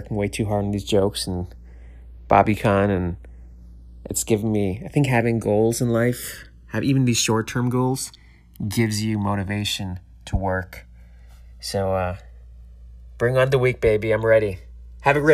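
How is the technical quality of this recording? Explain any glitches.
The recording has one fault, present from start to finish: channels drifting apart. The two channels appear to have been captured on devices running from separate clocks that disagree by something on the order of 150 parts per million, so the time offset between left and right grows steadily, reaching roughly 2 ms by the end. Summed to mono, that shifting offset creates comb-filter notches that sweep slowly through the spectrum, heard as a gradual flanging swirl over the speech.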